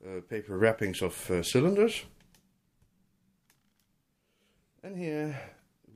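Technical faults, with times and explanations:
No technical faults can be heard anywhere in the clip. Nothing in the audio calls for a time or an explanation.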